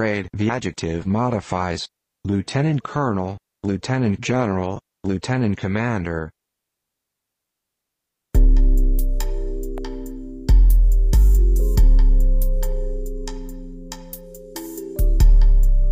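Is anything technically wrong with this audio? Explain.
Yes. An electrical switching spike lands at 9.78 s: a single sharp snap peaking around -20 dBFS, sitting on top of the sound rather than replacing it. The likely cause is a nearby switch, motor or static discharge arcing briefly and coupling into the audio line.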